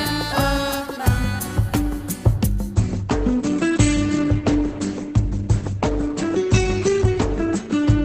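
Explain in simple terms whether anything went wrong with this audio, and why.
Something does go wrong, starting at 2.75 s and lasting to the end. This is an adaptive stream at a lower bitrate. The stream's connection slowed, so the player switched to a much lower-quality version of the same audio to keep it playing. There is no gap or pause. The sound just changes suddenly. From that point it loses its crisp top end, with nothing above 8.5 kHz, and sounds duller.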